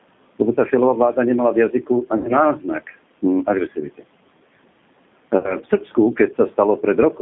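A speech recording carried over a G.729 codec call. The whole clip is narrowband. Nothing comes through below about 150 Hz or above 3.6 kHz. The codec rebuilds each 10 ms frame from a vocal tract filter, a pitch predictor and a few pulses. At 8 kbit/s that leaves the voice rough, thin and faintly synthetic. The damage is plainly audible throughout. VoIP packet loss concealed by the speech codec occurs twice. The first is from 2.17 to 2.32 s, right after "vláda nemala v jazyku". About 80 ms of audio is missing, which fits four lost 20 ms packets. The second runs from 5.38 to 5.57 s, with about 60 ms missing, which fits three packets. In both, the decoder repeats its last pitch and filter at falling gain. The voice smears into a fading buzzy tone or coloured noise. It stays weak for a while after the stream resumes, because each frame builds on the one before.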